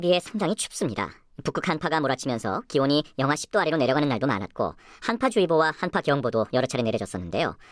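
Throughout, a wrong sample rate plays the speech about 1.38 times fast and 5.55 semitones high, fitting 16 kHz audio played at 22 kHz; spectrogram formants sit stretched upward.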